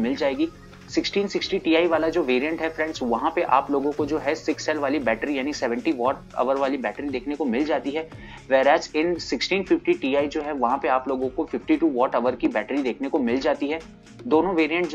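No technical faults are audible.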